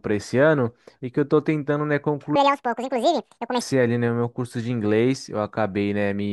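From 2.36 to 3.61 s, a section at the wrong speed plays at 1.91 times its recorded rate, likely because it was fitted to the wrong clock. The speech turns hurried and high, roughly ten semitones up. Tempo and pitch jump together, so this is not a plain pitch-shift.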